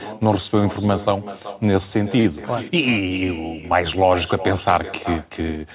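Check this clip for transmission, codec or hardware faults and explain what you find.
Two faults are audible in this narrowband speech, which has nothing above 4 kHz, consistent with G.711 mu-law.

Throughout, there is echo with no canceller. The far end's loudspeaker feeds its microphone, returning each phrase around 0.4 s later, about 15 dB quieter and thinner.

From 2.20 to 2.26 s there is a short stall from a late packet. The jitter buffer ran dry, so the last sound was held about 44 ms, then resumed with nothing lost.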